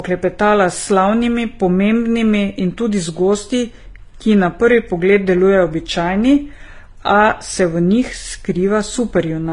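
Transcoding between lossy codecs, throughout the speech: the sound most likely passed through a low-rate HE-AAC stage and then Vorbis, so the second encoder spends bits re-coding the first one's artefacts and adds its own, with nothing above 10.6 kHz.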